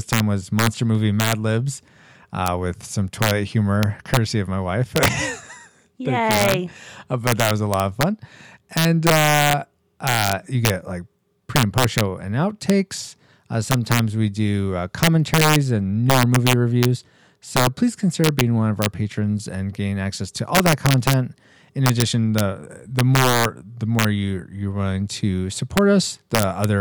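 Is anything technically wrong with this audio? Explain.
Yes. Integer overflow runs throughout this speech clip. The signal is driven roughly 4 dB past full scale, and instead of being limited, the few peaks that exceed it, well under one percent of samples, wrap to the opposite extreme. Each wrap produces a violent crack on loud syllables, harsher than ordinary clipping.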